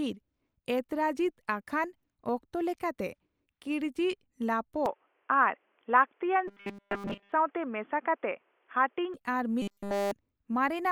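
Input switched to a poorer device, from 4.86 to 9.14 s: the speech abruptly turns dull and boxy, and then opens up again at 9.14 s. There is no gap at either switch and the loudness stays about the same. A faint new background noise sits well below the speech. This is likely a change of input to another microphone or a headset's call profile, which passes only a narrow band.

Robotic sound from repeated short buffers, from 6.48 to 7.32 s and again from 9.62 to 10.11 s: the speech collapses into a rigid, metallic buzz at 200 Hz that still roughly follows the syllables. The likely cause is audio arriving too late, so the software loops the last 5 ms in place of the real signal, and in both stretches essentially all of the sound is repeats. That 5 ms repeat sets the 200 Hz buzz rate.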